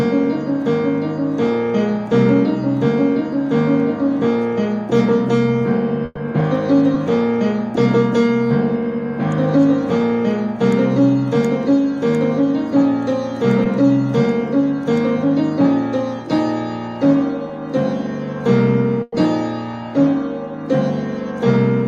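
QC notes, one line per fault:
Throughout: clock slip clicks, faint regular ticks roughly every 0.3 s, likely from unsynchronised clocks around 100 ppm apart dropping or repeating one sample each time.
6.05–6.17 s and 19.02–19.13 s: burst of packet loss, about 110 ms and 100 ms of audio missing, last sound held and faded before playback resumes further on.
6.94 s, 13.64 s, 17.48 s: short concealed packet loss, 10 ms holes each filled by extending the preceding sound, heard as a brief smear or wobble.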